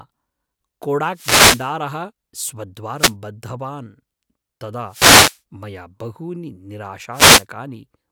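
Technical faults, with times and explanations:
1.09–1.75 s, 2.96–3.14 s, 4.87–5.40 s and 7.12–7.45 s: wireless microphone noise hits, four short bursts of static swishing over the speech. Each is the FM radio link from the mic fading as reflected signals cancel the direct one. The receiver's noise floor rises up through the gap, so you hear a hiss that cuts across the voice. The third one ends just before "मया बहूनि".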